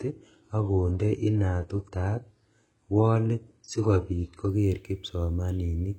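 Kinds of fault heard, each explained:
Adaptive stream starting at a low bitrate: the player opened on a low-quality rendition so the speech could start at once, then stepped up after measuring the connection. Until 4.49 s the treble sounds thin and synthetic, with stronger codec artefacts, which fits a 12 kbit/s HE-AAC start. Quality then jumps, with no gap, to what points to 96 kbit/s AAC-LC. A spectrogram shows smeared, patchy highs turning into clean detail at 4.49 s, below a hard ceiling at 11.5 kHz. The waveform stays continuous.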